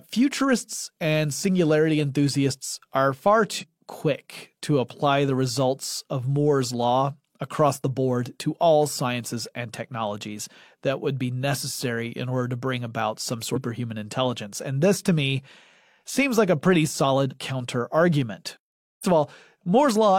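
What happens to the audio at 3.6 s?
At 3.58 to 3.64 s, right after "singularity enthusiasts are far" and before "quick to apply the", there is damaged data in a compressed stream. For about 64 ms the decoder receives corrupted frames, misreads them, loses sync and hunts for the next valid frame header. The result is a brief chirp, squawk, click or short hole.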